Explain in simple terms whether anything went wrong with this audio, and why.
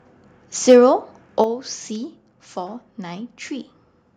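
From 0.69 to 0.77 s the speech turns harsh and crackly. The loudest moments get their tops chopped off. This is likely microphone overload.

At 1.44 s, the speech and background suddenly get quieter in one step. This is likely the microphone volume stepped down after that distortion.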